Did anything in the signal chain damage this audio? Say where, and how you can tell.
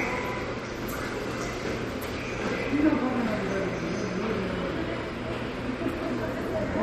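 Yes, at the codec stage, throughout: watery, swirling artefacts and nothing above 14.6 kHz. A spectrogram shows a flat ceiling and flickering holes, likely MP3 compression at around 48 kbps.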